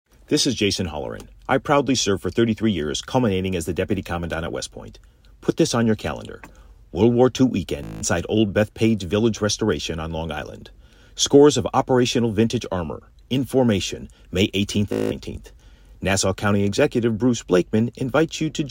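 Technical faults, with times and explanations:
7.84–8.02 s and 14.93–15.11 s, Bluetooth stutter: In both places the speech breaks into a short machine-gun buzz lasting about 0.19 s. Packets arrived late or not at all, so the receiver kept replaying its last short buffer slice until fresh data came. A gap of this length fits roughly ten lost packets. When the link recovers, the speech resumes further along, as though it had kept playing, so the audio from those intervals is missing rather than delayed.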